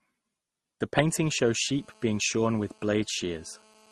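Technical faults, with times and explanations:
Technical faults, with times and explanations:
Throughout: transcoding between lossy codecs. Nothing is heard above 12.2 kHz, and the speech carries two different kinds of coding damage at once: the artefacts of an MP3 encoder at 48 kbit/s and those of a later Opus pass at 32 kbit/s, heard together. This is likely the result of one lossy encoding being decoded and re-encoded. The second codec spends its bits reproducing the first codec's artefacts, adds its own, and keeps the lower bandwidth limit.
1.08 s to the end: GSM phone buzz. A hard, raspy buzz appears at 217 Hz with a dense stack of harmonics. It sits about 32 dB below the speech and has no relation to what is being said. It holds steady to the end, which fits a 2G handset nearby on an active call. That handset transmits radio bursts 217 times a second, and the audio circuitry rectifies those pulses into the audible buzz.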